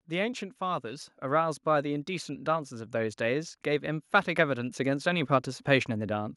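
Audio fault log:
0.05–6.32 s, automatic gain rising: the automatic gain control judged the incoming level too low and kept pushing its gain upward across almost the entire clip, adding about 12 dB by the end. Because the boost is applied to the whole signal rather than to the speech alone, the voice and the background noise swell together in a slow, steady climb, so the room sounds as if it is drawing closer while the talker's loudness creeps up.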